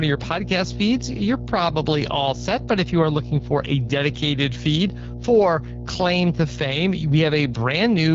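From the start to the end of the speech, a steady mains hum sits under everything as a continuous low tone at 60 Hz, at roughly 10 dB below the speech, so it is clearly present even while someone is talking. Power-line current has leaked into the signal path, through either a ground loop or a nearby transformer, and its fundamental stays fixed in pitch and level for the whole clip rather than following the speech.

Also present throughout is AMR wideband (HD Voice) codec damage, plainly audible as a rough, raspy texture on the speech. The codec models speech with a pulse-excited vocal-tract filter and synthesizes its top band from shaped noise. The roughness points to one of its low modes, which fits an 8.85 kbit/s setting, where too few bits remain to describe the excitation cleanly. Nothing is present above 7.4 kHz, consistent with this codec's wideband limit.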